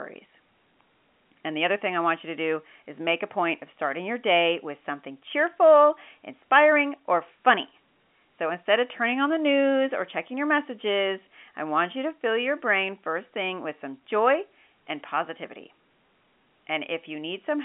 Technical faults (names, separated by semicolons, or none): none